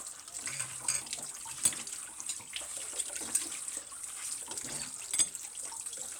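No technical faults can be heard anywhere in this recording; the signal stays intact and stable throughout.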